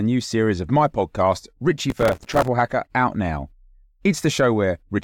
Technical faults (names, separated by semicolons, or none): processor overload crackle